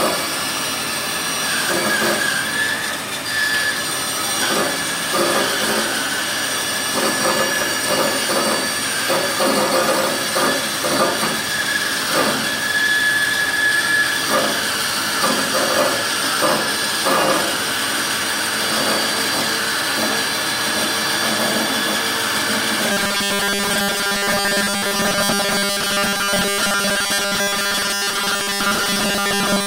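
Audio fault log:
22.92–29.67 s robotic sound from repeated short buffers: metallic buzz at 200 Hz, fitting a 5 ms stretch likely repeated in place of most of the audio.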